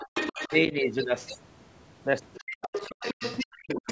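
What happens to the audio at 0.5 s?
Speech suppressed in double talk, from 0.48 to 0.53 s: the talker's voice briefly drops by about 10 dB while the far side is speaking, likely because the echo canceller turned everything down.

The other side's voice leaking through is also present from the start to 0.58 s: a second voice, only a little quieter than the talker, comes through, likely where the loudspeaker echo wasn't fully cancelled.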